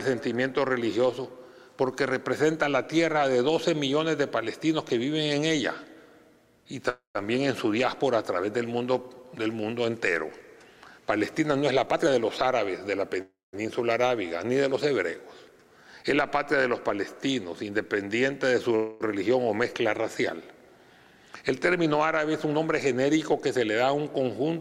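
At 6.89 to 7.17 s the sound stalls into a fading buzz or hiss, then silence, and resumes where it stopped. It recurs at 13.21 to 13.55 s and at 18.76 to 19.02 s, the last without silence. This call audio freeze was likely the jitter buffer running dry while packets were delayed.

From 11.86 to 13.03 s the audio runs hurried at 116% speed with unchanged pitch. Milder stretches follow at 17.39 to 18.03 s (108%) and 21.42 to 23.03 s (107%). This jitter buffer speed-up comes from trimming pitch-period slices to shed excess delay, about 200 ms, 70 ms and 150 ms respectively.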